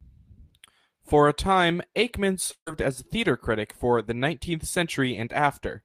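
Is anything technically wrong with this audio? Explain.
Yes. From 2.51 to 2.69 s the speech breaks up, just before "as theatre critic for". The last sound is stretched into a decaying buzz for roughly 150 ms, drops to silence for about 80 ms, and then speech resumes with around 160 ms of content gone rather than delayed. This is likely a long network dropout, where packets stopped arriving and the receiver concealed the gap by extending earlier audio until it gave up.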